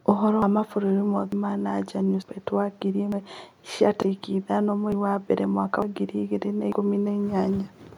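A speech recording with regular skips at 0.42, 1.32, 2.22, 3.12, 4.02, 4.92, 5.82 and 6.72 s. Each drops about a tenth of a second, and the edges are butted together without silence. This is likely audio missing between chunks, with the recorder losing a piece at each one-second chunk boundary.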